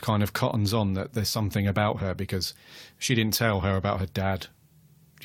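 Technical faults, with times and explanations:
No technical faults can be heard in this speech recording.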